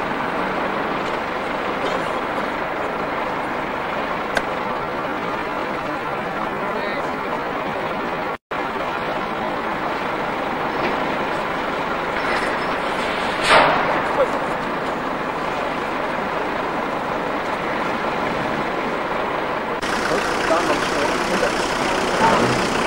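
A time-stretched section runs from 4.57 to 9.71 s. The pace abruptly drops to about 0.65 times normal speed while the pitch stays put, which likely comes from software lengthening this stretch by repeating short pieces of audio so that it fills more time without sounding lower.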